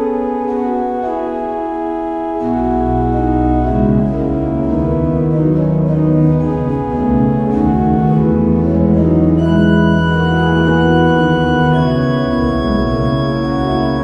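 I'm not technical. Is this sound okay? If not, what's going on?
No. At about 10.68 to 10.70 s, compressed frames are skipped. Roughly one frame, around 20 ms of sound, never plays, so the sound jumps ahead.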